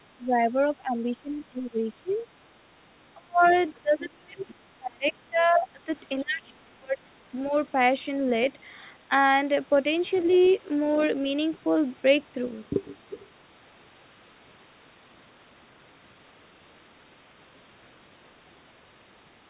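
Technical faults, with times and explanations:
0.18–2.26 s, 3.14–3.52 s, 3.81–5.89 s and 6.22–7.21 s, speech suppressed in double talk: the talker's level sinks and recovers in patches, with the deepest dips roughly 20 to 40 dB down and the second and third stretches hit hardest. This pattern is likely the echo canceller failing to tell the near talker apart from loudspeaker echo while both sides were talking. It then clamped everything, thinning and breaking up the speech.
2.10–2.15 s, 3.44–3.62 s and 10.15–10.52 s, other side's voice leaking through: faint scraps of a second voice surface underneath, roughly 25 to 35 dB below the talker. The first is only a brief flick, and the later two are longer fragments. This is likely residual echo: the far end's voice, played on the talker's loudspeaker, was picked up again by the microphone and not fully cancelled. All of it sits within the 4 kHz-limited band of the G.711 call audio.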